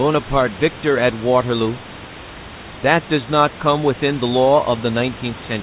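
No technical faults can be heard in the speech, which sits about 16 dB above a bed of room noise and carries nothing above 4 kHz, as expected from a telephone-band call codec such as G.711 mu-law at 64 kbps.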